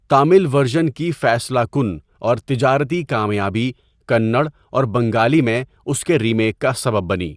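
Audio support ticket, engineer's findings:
Listened through the whole speech recording and found nothing to flag, so no findings to log on this one.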